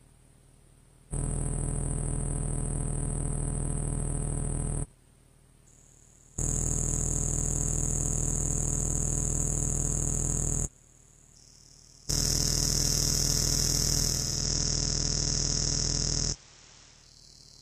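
At 14.05 s a hybrid receiver lost digital reception, blending to analogue FM over 0.42 s; the audio drops about 2 dB, gains hiss, then returns at 17.24 s.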